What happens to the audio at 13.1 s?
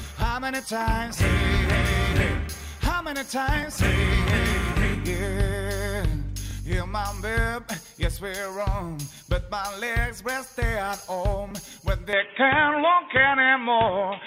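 Input switched to a poorer device, from 12.13 s to the end: likely a lower-grade microphone. The band narrows, the level shifts by about 5 dB and faint new noise appears, about 30 dB below the signal, with no gap.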